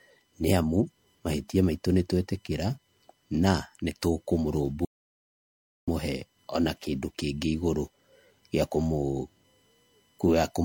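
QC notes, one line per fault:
Throughout: USB whine. A steady whine of fixed pitch sits under the speech, built on a 1 kHz tone with its strongest component at the third harmonic, 3 kHz, at about 45 dB below the speech. That spacing matches the 1 ms frame rate of a USB bus, whose current pulses leak through shared power or ground into the audio path. The result is a constant high tone that does not follow the speech at all.
Throughout: generation loss. The speech sounds swirly, smeared and hollow, with soft, blurred consonant attacks and nothing above 16.6 kHz. This is likely the result of lossy encoding repeated a few times over, in a way that fits a low-rate MP3 chain around 64 kbit/s. Each pass quantises again on a shifted frame grid, so the noise and spectral holes pile up beyond what a single encode at that rate would leave.
4.85 to 5.88 s: audio dropout to silence. The speech cuts off mid-flow and returns about 1.03 s later. 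The gap is silent, with no room tone or hiss underneath, and whatever was said during it is gone. The input was likely lost for that moment, through a disconnect, a failed link or a brief mute, while the recorder carried on writing silence in its place.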